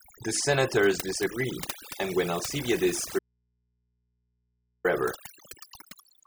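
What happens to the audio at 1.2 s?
At 1.2 s the speech sits over a near-silent background flecked with twinkling specks, and this overdone noise removal runs through the whole clip. A noise reducer set too hard is switching off individual frequency bands near its noise estimate, taking quiet speech detail with them.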